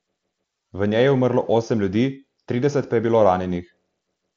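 No technical faults can be heard in the speech, which comes over a Bluetooth mSBC headset link with nothing above about 7.6 kHz.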